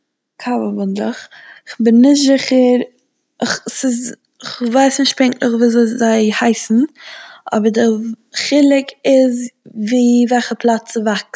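No technical faults can be heard in this speech, which has passed through normal call microphone processing with nothing above 8 kHz.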